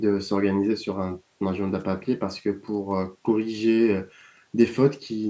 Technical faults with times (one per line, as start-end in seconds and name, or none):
none